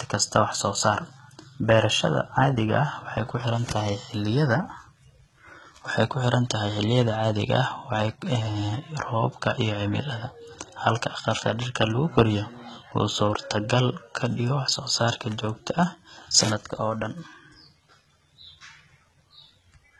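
Likely HE-AAC compression, throughout: treble above a low crossover is rebuilt from copied lower bands, cut off at 11.8 kHz, leaving sibilants gritty and metallic, which fits about 16 kbps.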